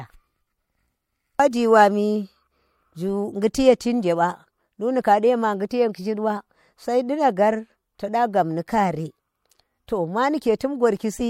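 Pre-echo appears at 5.69 s, 5.93 s and 10.59 s, the last just after "to maa". Each time, a short burst of hiss, about 16 to 17 ms long and roughly 12 to 16 dB above the surrounding floor, runs ahead of a sharp speech attack and softens it. This fits a codec using blocks of about 26 ms without switching to short blocks, so noise sized for the loud onset spills into the quiet moment before it. A spectrogram shows a broadband smear leading each onset edge. A waveform shows a raised noise floor just before the transient.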